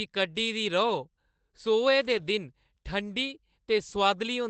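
At 2.17 to 2.23 s, a lost packet rebuilt from error correction: packets dropped in transit, and the decoder filled the hole with the lower-bitrate backup copy carried in the following packet. About 40 ms of speech was reconstructed this way, which fits two lost 20 ms packets. There is no gap or click, only a brief stretch that sounds rougher and noisier than the surrounding Opus call audio, which tops out around 8 kHz.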